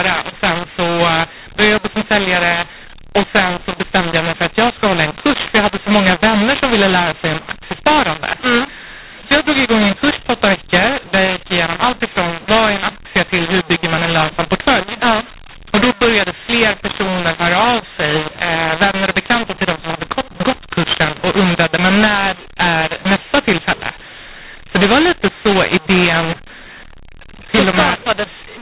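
From start to finish, this speech has the mu-law and A-law mixed up. It was written as A-law and read back as mu-law, so every sample is looked up on the wrong logarithmic curve and loudness gets scrambled. Some peaks swell, some parts shrink, and the quietest samples jump well above silence. That gives the speech a gritty, harsh distortion and fills the pauses with hiss. The audio still stops dead at 4 kHz, which fits ordinary 8 kHz telephone coding.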